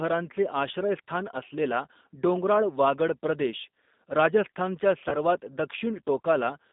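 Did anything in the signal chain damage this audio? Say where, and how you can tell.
Yes. At the codec stage, the whole speech clip carries G.729 coding at 8 kbit/s. The band sits between about 200 Hz and 3.7 kHz, and the speech has that rough, slightly synthetic edge you get when it's rebuilt from a filter, a pitch predictor and a handful of pulses per frame.

There's also VoIP packet loss concealed by the speech codec, a network-stage fault, from 5.09 to 5.15 s. The decoder stretches the last pitch and filter into a fading buzzy tone or coloured noise. The gap sounds like about 30 ms, which points to three 10 ms frames dropping out.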